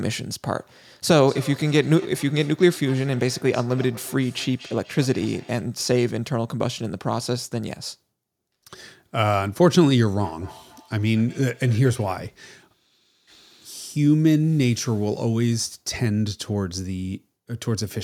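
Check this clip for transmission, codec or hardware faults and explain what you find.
Feedback echo between two devices appears from 1.15 to 5.7 s and from 10.2 to 12.28 s. A nearby device replays the call into a microphone whose canceller ignores it, so speech returns roughly every fifth of a second, thin and ringing, peaking about 21 and 24 dB below the speech.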